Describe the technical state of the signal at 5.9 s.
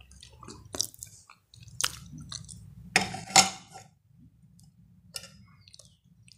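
At 5.9 s the level sits about 10 dB below where it was before 3.24 s, the result of a sudden gain jump that begins at 3.24 s and holds to the end of the clip. The drop likely comes from a digital gain setting applied between one sample and the next with no ramp. The sound and its background noise fall together and stay down, which sets it apart from a fade or compressor action, where the change would glide or pump.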